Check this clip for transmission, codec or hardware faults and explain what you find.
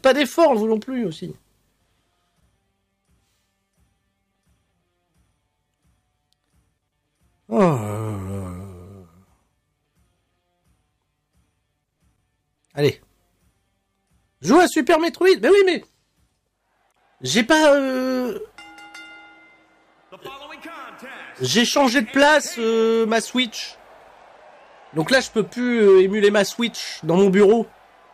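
One fault is present, hard clipping, and it runs through the whole clip. Somewhere upstream the signal was driven about 3 dB beyond what a stage could pass, so its peaks were sliced flat, affecting around one percent of samples. Those squared-off tops generate harmonics reaching far up the spectrum, heard as crackle on the peaks. On a waveform the loudest excursions show flattened plateaus; a spectrogram shows brief vertical streaks of high-frequency energy aligned with each peak.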